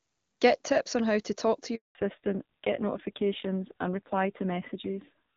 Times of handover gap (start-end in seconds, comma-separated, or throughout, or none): 1.75-1.95